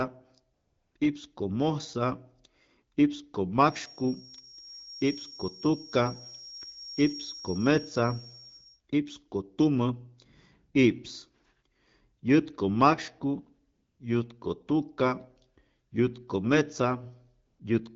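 From 0.53 to 0.95 s, and again briefly at 0.98 s, the real background drops out and AMR comfort noise takes its place. The handset treated these stretches as silence and stopped sending speech frames, and the receiving end filled the gap with a smooth synthetic hiss built from a rough level and spectrum estimate. The result is a steady, featureless noise bed that switches in and out.

From 3.59 to 8.81 s a thin feedback whistle at 5.6 kHz sits about 15 dB under the speech, holding its pitch while its level slowly swells and fades. It is likely caused by the loudspeaker-to-microphone loop idling just at the edge of oscillation, sustaining one tone without building up.

Comfort noise returns from 13.73 to 13.99 s and from 17.45 to 17.59 s. The AMR wideband (HD Voice) codec underneath shows only light coding damage, which fits a rate around 12.65 kbit/s.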